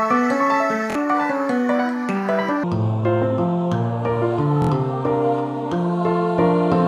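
Right from the start, up to about 2.64 s, there's a section at the wrong speed: the audio runs 1.68 times too fast, so everything is both hurried and pushed up by around ten semitones, a chipmunk-ish lift. Speed and pitch move together here, so it's likely the result of that stretch being played against the wrong clock rather than any deliberate pitch effect.

Inside that fast section, from 0.91 to 0.95 s, there's a repeated buffer. One short slice plays twice more in a row with hard joins, giving a quick stutter. Each repeat lasts about 23 ms, which fits a 1024-sample buffer, and roughly 50 ms of fresh audio gets skipped. A second one hits from 4.62 to 4.69 s, with three extra plays this time, so the stutter is a bit longer, and about 70 ms goes missing.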